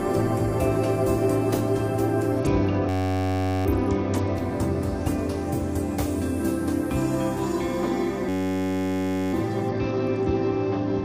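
Bluetooth SBC bit pool drop, 2.39 to 4.35 s: the link's encoder cut its bit budget sharply, which fits a fall from bit pool 28 to 9, near 78 kbps, so the treble dulls and gritty noise rises.

System hang loop, 2.89 to 3.66 s: a frozen driver left the hardware replaying one 10.67 ms slice, which fits a 512-sample buffer, producing a steady buzz at 93.8 Hz.

System hang loop again, 8.29 to 9.33 s: the same 10.67 ms loop repeats, buzzing at 93.8 Hz.

Bluetooth SBC bit pool drop again, 9.69 s to the end: the audio turns dull and gritty once more as the bit pool falls.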